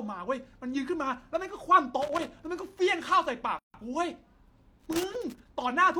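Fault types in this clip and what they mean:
Loose connector crackle: a worn or dirty contact keeps making and breaking as it moves, chopping the signal into irregular scratchy bursts, from 2.02 to 2.39 s and again from 4.80 to 5.46 s. Unlike isolated digital clicks, the crackle is ragged, dense and uneven.
Gap at a join of encoded pieces: separately encoded segments were joined with their start delay and end padding left in, so the speech stops for 153 ms, from 3.59 to 3.74 s, then resumes exactly where it stopped. Joins fall every 4.0 s. Unlike a dropout, nothing is lost; silence is inserted, its edges smeared.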